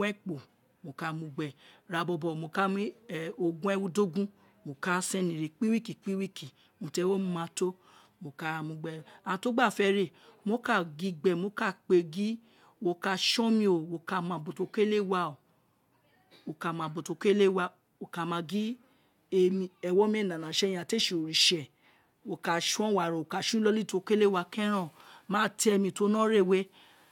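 No technical faults can be heard anywhere in the recording.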